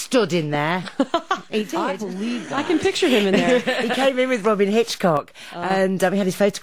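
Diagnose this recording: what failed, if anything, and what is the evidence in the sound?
Level falls abruptly by about 6 dB from 1.62 to 2.58 s and 5.17 to 5.70 s. Likely one channel drops out in the analogue wiring before the mono sum.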